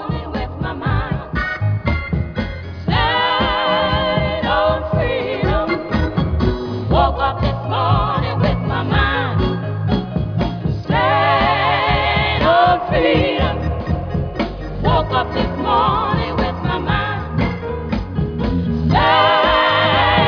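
No technical faults can be heard.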